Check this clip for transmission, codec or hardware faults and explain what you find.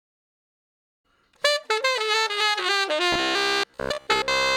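One fault is present. From 3.13 s to the end of the clip, there is robotic sound from repeated short buffers. New audio likely arrived too seldom, so the gaps were filled by looping about 15 ms of the latest audio. Most of this stretch is repeated material. The loop imposes a fixed buzz near 67 Hz, and the sound turns rigid and metallic.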